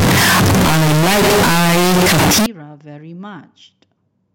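From 0.0 to 2.46 s the speech turns into loud, harsh distortion, quiet parts as loud as the rest. This is likely signed and unsigned mixed up in 16-bit samples.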